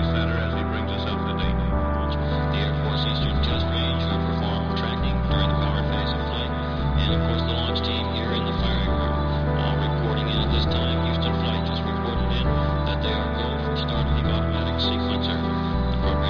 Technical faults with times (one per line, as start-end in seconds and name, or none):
none